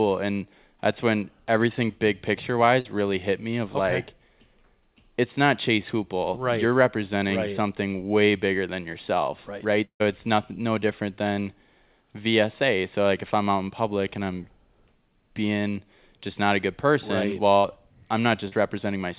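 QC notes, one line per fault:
2.80–2.87 s and 17.58–17.66 s, burst of packet loss: the last sound is held and fades for about 45 and 60 ms, then resumes with a jump over the missing audio.
9.85–10.02 s, long network dropout: about 150 ms of fading held sound decays into silence before the audio returns with a chunk gone, likely from arrival stopping entirely.
18.48–18.54 s, short concealed packet loss: a brief smear of about 40 ms blends smoothly back, without the audible fade or jump of a burst.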